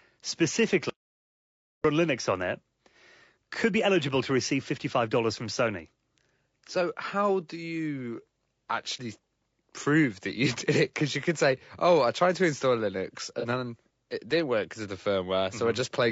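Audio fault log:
Throughout: low-delay AAC compression. The speech is rough and grainy, with a noisy haze filling the spaces between pitch harmonics and a thin, somewhat artificial top end. This is plainly audible damage. It is likely from AAC-ELD, the low-delay codec of video calls, at a rate that fits about 32 kbps. At such a low rate too few bits remain to keep the upper band and the gaps between harmonics clean.
0.90–1.84: audio dropout to silence. The sound cuts out abruptly for about 0.95 s and then resumes mid-flow. The gap is silent with no room tone at all, so nothing was captured during that stretch. The likely cause is a momentary loss of the input, such as a link or device dropping out or a brief mute, while the recorder kept writing silence in place of the missing audio.
13.40–13.45 and 15.02–15.05: AAC frame loss with concealment. Each event is a patch of about 30 ms, which fits a single lost frame. 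It sounds smeared and noisy rather than silent. The first falls just before "then it didn't work". The second comes right after "work because of the". In both, the decoder rebuilt the missing frame from the previous good spectrum with altered phase or interpolated energy, so the gap is covered by a brief blurred, phasey artefact.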